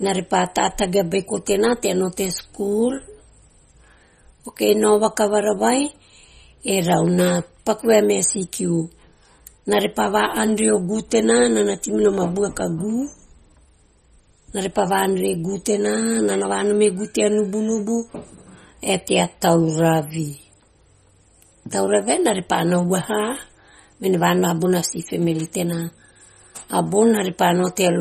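Throughout, likely MP3 compression at a bitrate that fits about 32 kbps drops weak frequency lines, leaving swirly, watery speech with nothing above 15 kHz.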